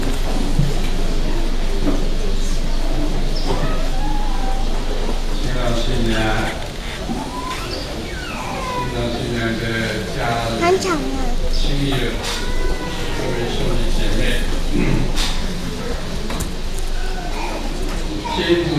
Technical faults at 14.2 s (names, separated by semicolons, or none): none